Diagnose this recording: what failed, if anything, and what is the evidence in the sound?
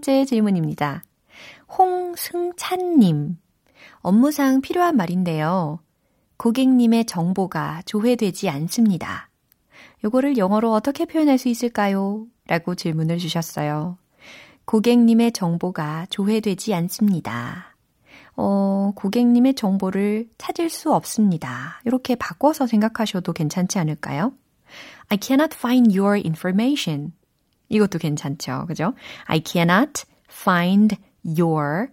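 Nothing failed: no stage between capture and playback leaves any audible sign of trouble in this recording. The speech continues throughout without a single event that would point to a problem anywhere in the chain.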